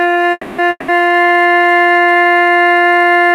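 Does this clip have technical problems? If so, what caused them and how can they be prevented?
Yes. A call audio freeze runs from 0.31 to 0.60 s. The music smears into a fading buzz for about 270 ms, with a brief 20 ms hush, then resumes where it stopped, nothing lost but now 270 ms late. Likely cause: delayed packets emptied the jitter buffer. A larger adaptive jitter buffer prevents it.

A long network dropout follows from 0.70 to 0.90 s. The last sound is stretched into a decaying hiss for 180 ms, including about 30 ms of near-silence, and the music comes back further on with 180 ms missing. Likely cause: lost packets that never arrived. Forward error correction or redundancy would prevent it.

A time-stretched section starts at 1.03 s and lasts to the end. The music suddenly runs 1.77 times faster at unchanged pitch, sounding rushed as short slices are dropped. Likely cause: software squeezing the audio to fit a length. 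Keeping the original duration, or stretching more gently, prevents it.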